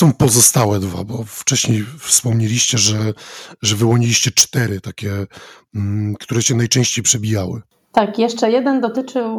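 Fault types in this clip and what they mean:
Microphone overload: at 0.01–0.65, 2.12–2.17, 3.68–3.95, 4.38–4.42, 6.77–6.81, 7.09–7.12 and 7.97–7.99 s, the loudest speech peaks flatten against the converter's ceiling, likely because the input level was set too high. Peaks run from about 1 dB to about 9 dB over full scale, and the flattened tops add a harsh, crackly edge. The worst are at 4.4 s, where roughly a fifth of samples are clipped, and at 0.01 s and 8.0 s.
Microphone volume stepped down: at 0.23, 4.41, 7.98 and 8.97 s, the whole signal, background included, drops suddenly by about 2 dB, then about 3 dB at each later point. Each drop is likely the call software lowering the device's input gain in one step after detecting overload. The steps at 4.41 and 7.98 s land right on clipped peaks, so the level falls just as the distortion hits.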